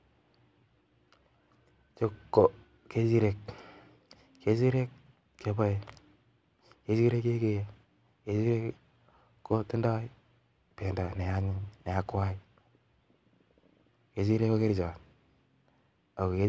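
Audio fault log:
No fault was found in this speech clip.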